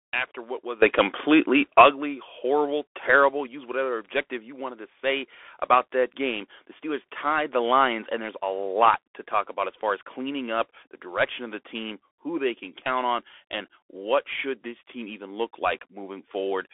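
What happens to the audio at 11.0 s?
The speech at 11.0 s, like the whole clip, passes through a Bluetooth CVSD headset codec, whose adaptive one-bit coding strips everything above about 3.8 kHz, leaving muffled, scratchy s sounds over granular hiss.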